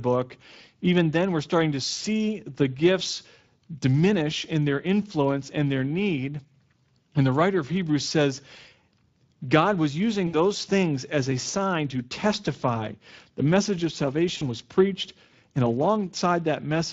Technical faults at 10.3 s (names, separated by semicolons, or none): Speex codec; VoIP packet loss concealed by the speech codec